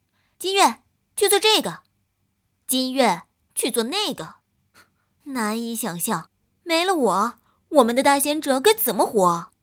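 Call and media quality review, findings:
Clock drift between sender and receiver: sender clock roughly 3% slow against receiver, whole clip. Jitter buffer drains steadily, so receiver stretches playout. Unlike network jitter, the timing error always points the same way, never bursty or random.

Repeated timing corrections, 0.06 s to 9.27 s: small repeated slices, unevenly spaced, playback near 97% speed, adding roughly 0.3 s overall. Receiver buffer logic padding to keep up. Unlike packet-loss concealment, heard at most as slight hiccups and an unsteady tempo.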